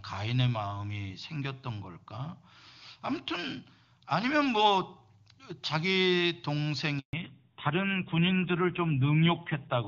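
At 6.99 s the speech cuts out for 140 ms, a handover gap: the call switched networks and no speech frames arrived until the new link came up at 7.13 s, so the audio drops to silence and that stretch is lost outright.

From 7.13 s to the end, a fallback to narrowband takes over. The clear HD Voice sound, which fits AMR-WB at about 23.85 kbit/s, gives way to what points to AMR-NB at 7.4 kbit/s. Nothing remains above 4 kHz, leaving the voice duller and rougher.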